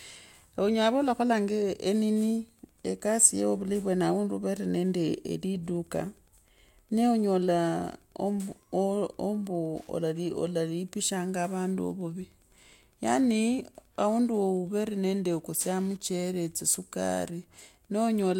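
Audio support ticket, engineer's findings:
Wi-Fi interference, 2.25 s to end of clip (18.40 s). Faint steady ticking about ten times a second, well below the speech. Nearby Wi-Fi radio's beacon every 102.4 ms, rectified by the audio circuit. Probable component: audio circuit close to the radio.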